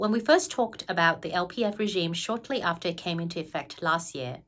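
Nothing goes wrong anywhere along the way here; there's no fault to point to at any moment in this bit of speech.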